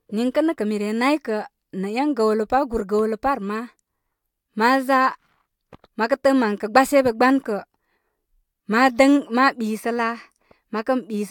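No technical faults are audible.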